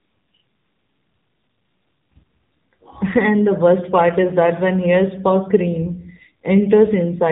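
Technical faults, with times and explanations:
Throughout, AMR narrowband mobile codec: speech band-limited with nothing above 3.8 kHz, buzzy synthetic timbre from sparse pulse excitation, consistent with roughly 7.4 kbps AMR-NB coding.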